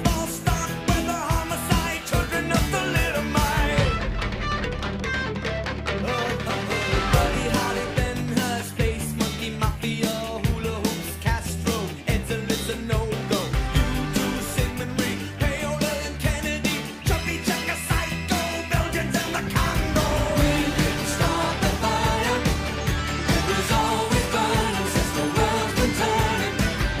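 No technical faults are audible.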